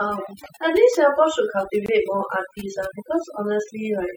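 Overdone noise removal runs throughout the speech: bands near the estimated noise floor are cut hard, leaving a twinkling near-silent background. A gap at a join of encoded pieces opens from 1.86 to 1.88 s, a 22 ms gap where untrimmed encoder padding interrupts the speech before it resumes.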